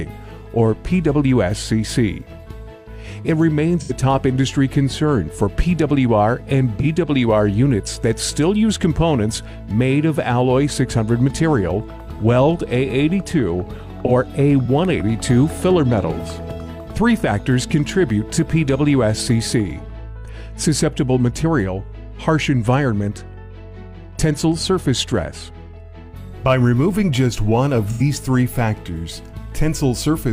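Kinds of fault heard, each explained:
AAC frame loss with concealment: four brief smeared, noisy, phasey patches, near 3.80, 6.80, 14.06 and 27.91 s, lasting about 43 or 85 ms. That fits one or two lost frames, which the decoder bridged by repeating the last good spectrum with scrambled signs or interpolated energy.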